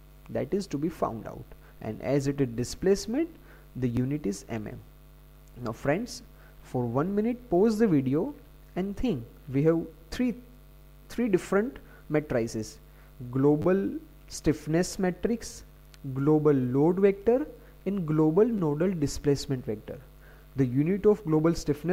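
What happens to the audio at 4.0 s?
At 3.97 s a repeated buffer plays one 10 ms chunk twice, heard as a brief click; unlike a dropout, no audio goes missing.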